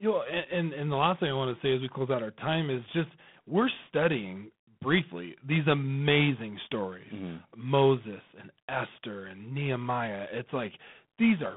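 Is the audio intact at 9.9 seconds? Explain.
No. G.726 ADPCM coding runs through the whole clip, including 9.9 s. Each sample is coded as a few bits of difference from a prediction, and the harsh, rasping hiss that tracks the speech level fits 24 kbit/s. Nothing passes above 3.8 kHz.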